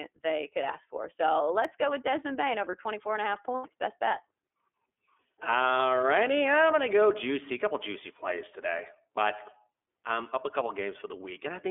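From the start and through the whole recording, the speech sounds boxed-in and slightly rough, with a faintly synthetic, buzzy texture and no brightness or air at all. That is the iLBC codec. The sound has been squeezed into a telephone band of roughly 300 Hz to 3.4 kHz, with nothing above 3.4 kHz. Its excitation is coded in self-contained 30 ms frames, which fits the 13.33 kbps mode. The coding damage is plainly audible.

At 1.65 s, just before "go with", a single sharp click cuts through the speech, seen as a thin vertical line in the spectrum. The likely cause is dropped samples. A handful of samples, a fraction of a millisecond, went missing, so the waveform jumps straight from one value to a later one. The gap is far too short to remove any audible sound, leaving only the tick of the discontinuity.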